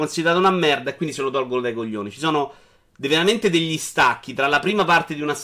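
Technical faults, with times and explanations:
The speech signal holds steady in level and continuity, with no technical faults at any point.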